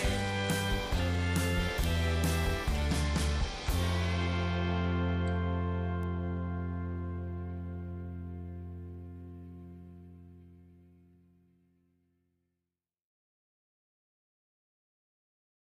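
A sharp, isolated tick at 1.84 s, peaking at about -12 dBFS, and a fainter one at 6.03 s, at about -30 dBFS, are both bit error spikes: a single sample's value jumped by a power of two when one bit flipped, then snapped straight back.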